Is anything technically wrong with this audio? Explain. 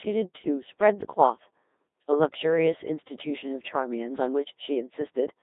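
Yes. A Codec 2 vocoder affects the speech throughout. The decoder never receives the original waveform, only pitch, voicing, energy and a coarse spectral envelope, and it rebuilds the voice from a set of sine waves. The heavy, robotic buzz fits a rate around 2.4 kbit/s. The sound is confined to a narrow band from 250 Hz to 3.7 kHz, so it is thin and lacks both low body and high air.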